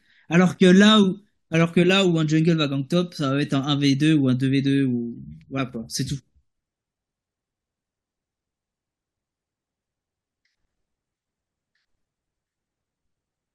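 At 5.58 s the speech jumps forward and a small slice of sound goes missing. These are compressed frames skipped: about three whole frames, each 21.3 ms long, never reached the output because they were absent from the stream or the decoder discarded them as corrupt. That dropped about 70 ms of audio.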